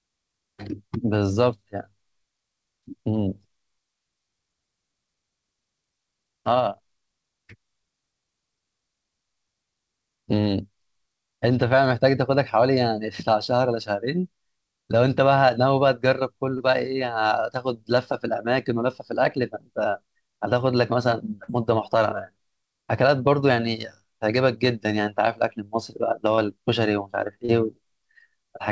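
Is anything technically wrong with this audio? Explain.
Yes. The speech has four short concealed packet loss events, at 16.58–16.62 s, 21.44–21.50 s, 26.36–26.40 s and 27.46–27.50 s. Each hole is about 20 ms, which fits a single lost packet, except the second, which is about 40 ms. The receiver covered each gap by extending the preceding sound, as pitch or shaped noise, then crossfaded back. This is heard as a brief smear or wobble. Separately, the band stops at 8 kHz, consistent with G.722 at 64 kbps.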